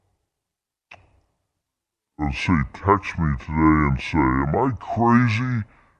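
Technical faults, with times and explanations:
Throughout: wrong sample rate. The speech runs at two thirds of its proper speed and sits about 7 semitones low, a drop of nearly a fifth, which fits audio recorded at 48 kHz being played back at 32 kHz without conversion. Unlike a pitch shift or a time stretch, where one changes independently, here pacing and pitch fall together by the same ratio, so the voice sounds both deep and drawn out.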